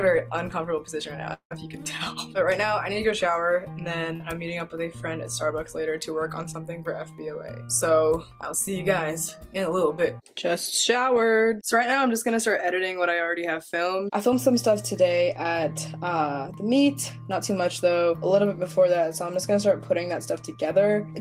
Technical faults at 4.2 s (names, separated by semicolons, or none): short concealed packet loss